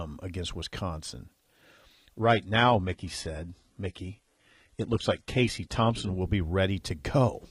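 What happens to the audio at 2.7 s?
An adaptive stream at a lower bitrate covers 2.21 to 6.21 s. The connection slowed, so the player switched abruptly to a cheaper version of the speech, with no gap. Treble vanishes above 11.8 kHz and codec artefacts thicken, which fits 16 kbit/s HE-AAC.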